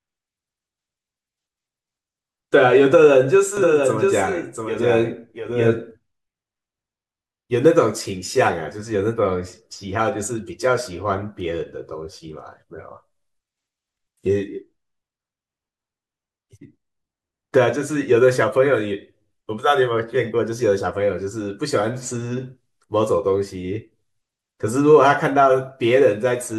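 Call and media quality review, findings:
Doubled audio track, 3.57–5.91 s: full-band copy of the speech trails by about 0.7 s, around 5 dB down, no decay or room colour. Waveform shows a smaller shifted duplicate with abrupt start and stop. Spectrogram shows repeated formant patterns. Likely a slower second capture path mixed in.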